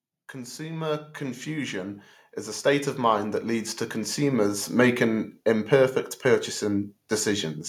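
From 0.32 to 2.06 s the automatic gain is rising: the AGC decided the input was too quiet and pushed its gain up by about 7 dB, so the speech and the room noise swell together, settling just before "is a". Right after "is a" it happens again, from 2.62 to 5.44 s, a slower climb of about 8 dB where everything creeps louder at once.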